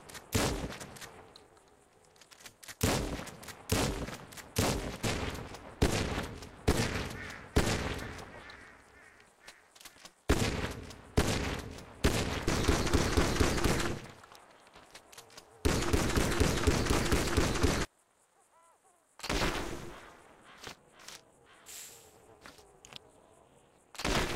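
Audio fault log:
Throughout: overlap-add ripple. Frames were windowed and rejoined with an overlap whose gains fail to sum evenly, so the level swings by about 60 dB once per frame, roughly 300 times a second, giving a harsh metallic buzz with extra tones around each note across the sound.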